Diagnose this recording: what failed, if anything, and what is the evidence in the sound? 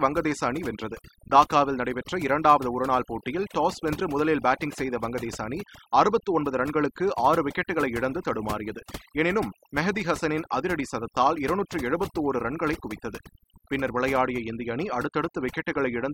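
The failure is overdone noise removal in the processing stage, present for the whole clip. Between phrases the background collapses to near silence, broken by twinkling specks. The suppressor was set too aggressively: any frequency band sitting close to its noise estimate gets pulled far down or switched off, so isolated surviving bands flicker as specks, and the quieter components of the voice are stripped away along with the noise.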